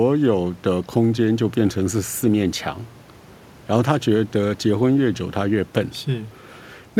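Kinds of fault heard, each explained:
No faults detected in this speech recording; nothing to report.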